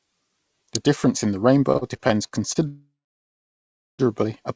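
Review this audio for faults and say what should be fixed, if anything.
Repeated stalls (stutter) run from 1.73 to 2.58 s. The jitter buffer emptied six times in that stretch because packets came in late or too slowly. Each time, the receiver stretched the last bit of sound to cover the wait. Together those fills add up to 163 ms, about 19% of the span, and the longest single gap is 42 ms. Nothing is lost, but the sound drags and hiccups. Prevention: use a deeper or adaptive jitter buffer and fix the network jitter so packets keep pace with playback.

A call audio freeze follows from 2.67 to 4.02 s. The sound hangs, then drops to roughly 1.08 s of silence before resuming exactly where it stopped. No content is missing, but a 1.31 s hole has been inserted and the delay grows by that much. The likely cause is packets held up in transit long enough to drain the jitter buffer, with the receiver extending and fading the last sound until they arrived. 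The G.722 call path limits the band to 8 kHz throughout. Prevention: find the network stall behind the freeze, through QoS and route or Wi-Fi checks, and let the buffer catch up afterwards instead of keeping the added delay.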